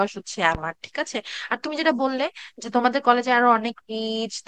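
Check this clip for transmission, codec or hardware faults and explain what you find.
One fault is present, a single loud pop near the start of the speech.

From 0.55 to 0.59 s, a loud pop rises roughly 10 dB above the surrounding speech level. The cause is likely a brief voltage spike entering the signal path, such as a connector being disturbed, a switch transient, a static discharge or a driver glitch. The downstream circuitry shapes that spike into a short pulse, heard as one sharp thump while the speech continues underneath.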